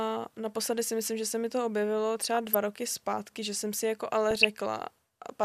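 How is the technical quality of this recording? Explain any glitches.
The speech carries three bursts of DAB burbling. The first is at 0.67 s, just before "si myslím že se". The second runs from 2.34 to 2.55 s, between "se mi to objevilo" and "roky zpátky že jsem". The third runs from 4.31 to 4.48 s, right after "že jsem si jako". Bit errors from weak digital radio reception slip past error correction into the MP2 audio and put brief noise blips into individual sub-bands. That gives a watery, bubbling texture over the speech rather than the clean silence or repeated fragments of a dropout.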